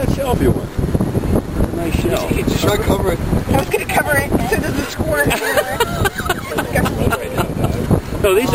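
A nearby DECT cordless phone or base station is firing its radio bursts at 100 Hz, and the audio circuit rectifies them, producing DECT cordless phone buzz throughout. It sounds like a steady, thin, harmonic-rich buzz sitting about 25 dB below the sound.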